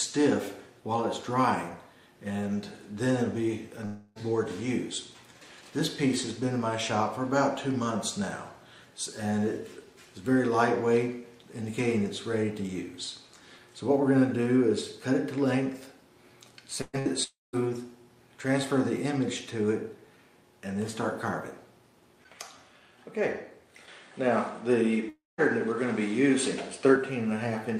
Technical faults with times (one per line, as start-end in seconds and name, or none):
3.85-4.18 long network dropout
16.81-17.08 burst of packet loss
17.23-17.56 long network dropout
23.88-26.96 input switched to a poorer device
25.09-25.41 long network dropout